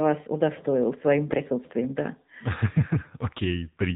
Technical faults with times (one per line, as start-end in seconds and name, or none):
0.00-3.95 AMR narrowband mobile codec
1.30-1.41 AMR bit errors